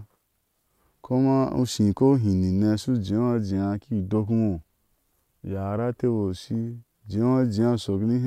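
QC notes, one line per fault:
No faults found in this speech clip. Nothing needed flagging at any point.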